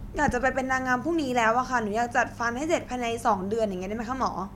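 Nothing to flag here: the speech runs its whole course without a single technical fault turning up anywhere along the way.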